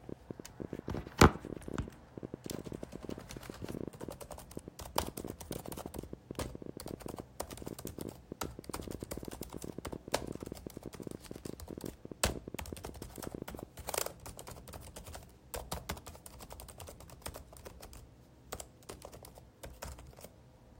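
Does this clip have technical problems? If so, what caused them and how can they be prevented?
Yes. A train of clicks runs from 0.09 to 13.64 s, about 13 per second, unevenly spaced, roughly two hundred in all, popping well above the sound. Likely cause: interference or a faulty connection or power supply. Shield cables, move away from noisy equipment, and check the interface.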